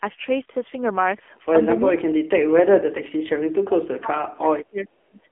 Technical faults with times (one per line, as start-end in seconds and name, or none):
0.00-5.32 AMR narrowband mobile codec
1.80-5.22 speech suppressed in double talk